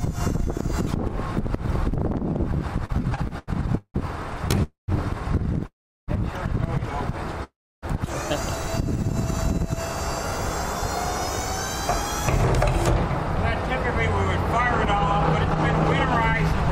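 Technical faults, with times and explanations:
2.85–3.96 s, repeated stalls (stutter): eight brief holds, longest 166 ms, fill about a third of this span as late packets repeatedly drain the jitter buffer, stretching rather than losing audio.
4.63–4.90 s, 5.66–6.10 s and 7.44–7.84 s, call audio freeze: the last sound is extended, then fades into silences of 150, 360 and 310 ms, likely from packets held up in transit, before resuming where it stopped, about 0.25, 0.42 and 0.39 s late.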